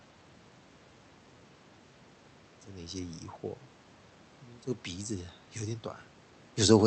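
No technical faults can be heard in this speech recording.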